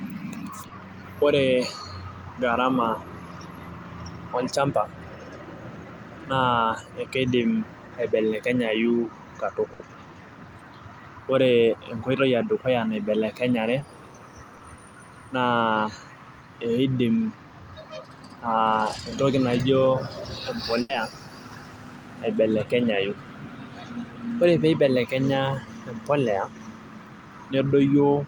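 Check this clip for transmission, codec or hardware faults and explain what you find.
The clip has two kinds of transmission fault, both from packets lost on the network.

Short concealed packet loss occurs three times: at 0.67, 13.79 and 14.57 seconds. Each time, about 20 ms of audio failed to reach the decoder in time. The receiver covered the hole by extending the preceding sound, then blended back into the real signal. Each event lasts about 40 ms. It is heard as a brief smear or wobble, and a short consonant can drop out.

A burst of packet loss occurs twice: from 9.73 to 9.81 seconds, and from 20.81 to 20.91 seconds. Here 60 ms and then 80 ms of audio were lost in a row. The receiver kept the last sound going and faded it as the gap went on. A voiced sound becomes a held buzz, and other sounds become a fading hiss. The speech then resumes further on, with the lost section gone.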